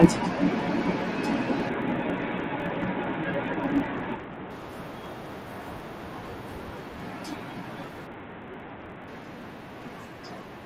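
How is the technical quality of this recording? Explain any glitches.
The recording has two faults: a steady buzz throughout, and two stretches of degraded, gritty sound.

A filter restarted on every block runs for the whole clip. Because its memory is cleared at each block boundary, every block opens with a small transient. These ticks repeat 50 times a second, merging into a 50 Hz buzz that rises and falls with the signal's level.

A Bluetooth SBC bit pool drop occurs from 1.69 to 4.50 s and again from 8.07 to 9.08 s. The congested link forced the encoder to spend far fewer bits, consistent with the bit pool falling from 28 to 5, about 54 kbps. Upper sub-bands starve while the rest is coarsely quantised, so treble dulls and gritty noise appears until the rate recovers.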